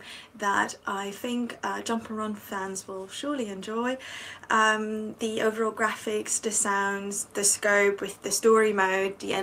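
No technical faults can be heard anywhere in the clip. There is nothing to place on the timeline and nothing that needs a repair note.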